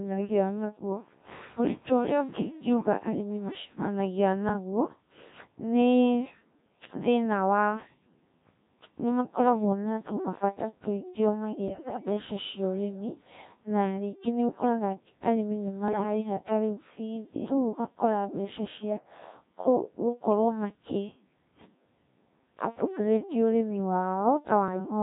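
This speech clip runs through a Codec 2 vocoder for its whole length, with heavy damage. The voice sounds robotic and buzzy throughout. The decoder rebuilds it from sine waves, using only pitch, voicing, energy and a spectral envelope. The original waveform is gone. The thin, coarse result fits the 1.3 kbit/s mode. Bit errors on digital voice radio strike twice. The first runs from 11.68 to 12.05 s. The sound jumps in pitch, level and tone colour, breaking into warbles and bleeps. Its length fits about nine corrupted frames at an error rate near one bit in ten. The second is shorter, from 15.88 to 16.03 s, with a similar burst of garbled tone. It fits about three frames hit at a slightly lower error rate. Each flipped bit sets a whole frame's synthesis, so small errors cause large jumps.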